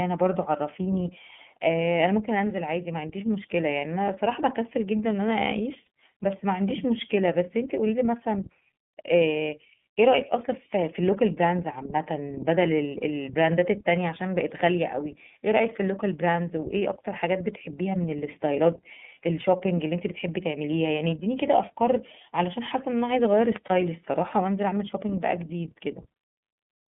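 From start to finish the speech passes through the iLBC codec, squeezed into a telephone band of 150 Hz to 3.5 kHz. Each frame's excitation is coded on its own, leaving a slightly rough, synthetic edge that is plainly audible. That grain sets it apart from simple band-limiting, and it fits the 30 ms frame mode at around 13.3 kbps.

At 5.84 s and again at 23.66 s come lost iLBC frames, each gap about 30 ms long. Rather than dropping to silence, the decoder repeats the last pitch cycle with noise mixed in, giving a brief held, buzzy vowel. The voice snaps back almost at once because iLBC frames do not depend on their predecessors.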